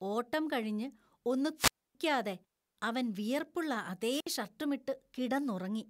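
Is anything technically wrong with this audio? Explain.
Yes. Twice the analogue FM wireless microphone's radio link fades until the receiver's squelch mutes the output, a wireless microphone squelch dropout. From 1.56 to 1.95 s, after "ഓട്ടം കഴിഞ്ഞ് ഒന്ന്", hiss rises and the speech drops to near silence for 273 ms. From 4.10 to 4.27 s a shorter 63 ms hole opens.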